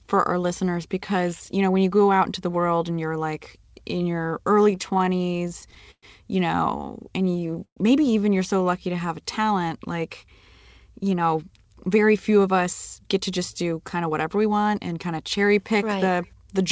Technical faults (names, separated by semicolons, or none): repeated stalls (stutter); jitter buffer slow-down; call audio freeze; jitter buffer speed-up